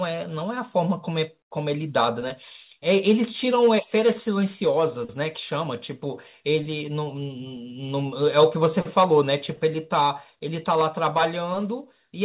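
No technical faults are audible.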